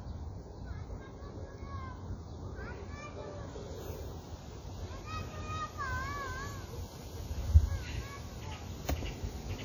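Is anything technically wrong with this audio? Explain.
Yes. Throughout, the sound rings and smears, with a washy hiss that swells and fades with the signal. This is likely WMA compression: long transform blocks spread quantisation noise over tens of milliseconds and drop weak components, and the heavy damage fits a low bitrate near 32 kbps.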